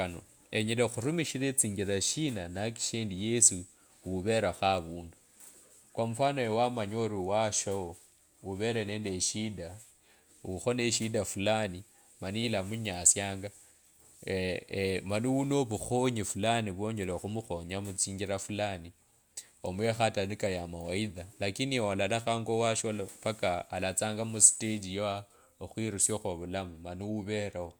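A speech recording with nothing technically wrong with it, so there are no times or causes to report.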